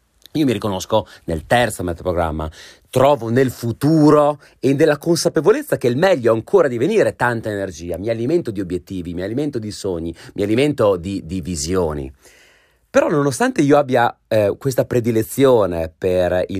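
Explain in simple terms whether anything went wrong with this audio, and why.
Nothing went wrong with this audio, because no faults can be heard anywhere in it.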